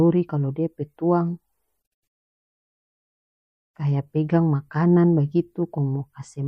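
Speech with a watery, swirling quality throughout, s sounds edged with metallic chirps. The likely cause is MP3 compression at a bitrate consistent with about 64 kbps, with weak frequency lines dropping in and out between frames.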